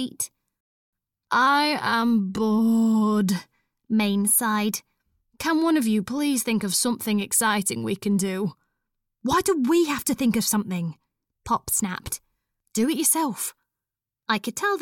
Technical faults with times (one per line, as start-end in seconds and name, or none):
0.61-0.93 rebuffering stall